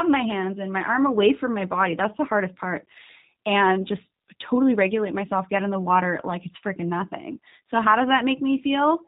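From start to end, the speech carries G.729 codec damage, plainly audible. Nothing above 4 kHz survives. Each 10 ms frame is rebuilt from a vocal tract filter, a pitch predictor and a few pulses. Voices sound rough and synthetic, which fits 8 kbit/s G.729A.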